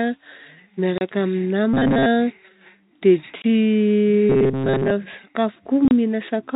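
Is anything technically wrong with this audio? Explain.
Yes, the speech has two kinds of fault, heard over a G.711 telephone-band channel whose narrow, sub-4 kHz sound is normal for that format.

Packet loss filled with silence: at 0.98 to 1.01 s, 3.42 to 3.44 s and 5.88 to 5.91 s the speech drops out completely for 30, 20 and 30 ms, with abrupt edges. The gaps are whole multiples of 10 ms, which fits 10 ms packets going missing and the receiver playing silence in their place instead of concealing them.

Robotic sound from repeated short buffers: from 1.74 to 2.06 s and again from 4.30 to 4.91 s the voice turns into a stiff, metallic buzz at a fixed 134 Hz, still roughly tracking the speech. The likely cause is audio arriving too slowly, so the playback keeps looping a fragment of about 7.5 ms (one over 134 Hz). Most of the audio in these stretches is repeated material, and the real signal is skipped.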